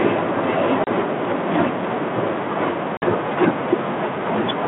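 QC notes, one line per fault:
0.84–0.88 s and 2.97–3.04 s: packet loss on an ADPCM call. Two hard-edged silent holes, about 30 ms and 50 ms long, each spanning a few packets. When the sound resumes, it comes back slightly distorted, settling within tens of milliseconds. The gap leaves the receiver's adaptive predictor and step size out of step with the sender's, and they must re-converge. The narrowband telephone band around it fits a 32 kbit/s G.726 link.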